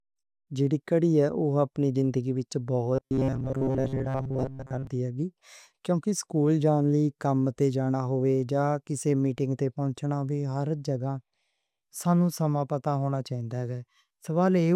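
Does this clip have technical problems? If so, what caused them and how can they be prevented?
Yes. From 2.95 to 4.87 s the speech turns into robotic sound from repeated short buffers: a rigid, metallic buzz at about 133 Hz that still loosely tracks the speech. That pitch fits a segment of roughly 7.5 ms being replayed over and over, with most of the real audio in that stretch discarded. The likely cause is audio data arriving too slowly, so the playback side loops its last short chunk to fill the gap. Preventing it means giving the stream a larger jitter or playout buffer and making sure the capture and network path can deliver data on schedule.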